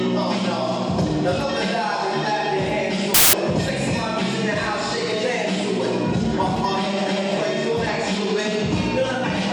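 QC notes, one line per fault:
3.14–3.33 s, samples built from the wrong bytes: for about a fifth of a second the sample bytes get assembled out of order or misaligned, so the jittery low bits end up driving each value. You get a burst of loud, harsh broadband noise, close to white on the louder sounds.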